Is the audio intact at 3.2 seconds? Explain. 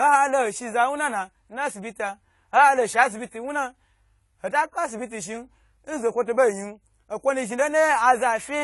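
No, at 3.2 seconds the speech sounds dull and smeared, with nothing above 11.5 kHz, and that holds throughout. This is likely AAC compression at a low bitrate, around 32 kbps.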